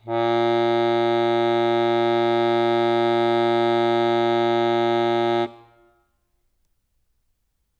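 No faults are audible anywhere in the music.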